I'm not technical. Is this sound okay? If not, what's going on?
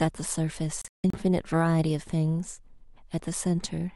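No. There is a digital broadcast dropout between about 0.82 and 1.14 seconds. The speech is muted in several short holes spread over roughly a third of a second, the longest lasting about 160 milliseconds, with about 220 milliseconds of sound missing in total. This happens when a digital receiver stops getting clean data and goes silent until good data returns. Whatever was said during those gaps is gone.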